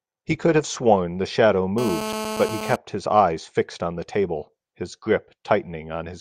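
A hard, raspy buzz with a dense stack of harmonics cuts into this speech clip from 1.78 to 2.76 s, steady throughout and about 7 dB below the speech. It is GSM phone buzz: a nearby phone on a call bursts 217 times a second, and the audio circuitry rectifies those pulses.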